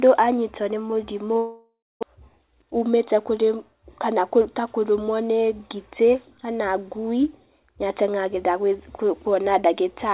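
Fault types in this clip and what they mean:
long network dropout: from 1.38 to 2.05 s the sound stops arriving, and roughly 600 ms of speech is simply gone. The gap is first bridged by a synthetic continuation of the last sound that decays into a buzz and then about 250 ms of near silence before audio resumes, slightly shifted in timing. The pattern likely reflects a stretch of lost packets that the receiver had to conceal.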